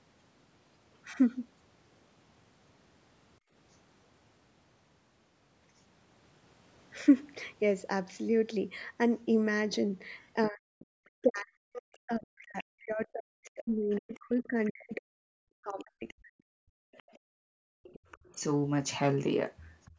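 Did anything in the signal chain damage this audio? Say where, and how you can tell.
Yes. Background gated by the echo canceller, in call processing: room sound dips at 3.39–3.52 s, 17.19–18.09 s and from 19.91 s, by up to about 38 dB.

Other side's voice leaking through at 10.22–11.06 s, 12.25–14.72 s and 15.79–19.91 s, the last as loud as the talker. This is likely residual echo the canceller missed.

Speech suppressed in double talk from 10.49 to 16.71 s. The talker drops deeply, roughly 40 dB, likely because the canceller turned down both overlapping voices.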